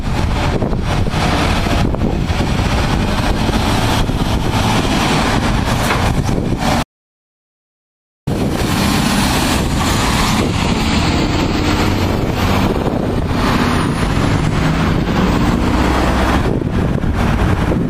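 At 4.79 to 4.81 s a skip ahead jumps forward with no gap, losing roughly 0.4 s of sound. Unlike a dropout, both sides are joined almost directly. From 6.83 to 8.27 s, an audio dropout to silence leaves a 1.44 s hole with no room tone, most likely from lost input while recording continued.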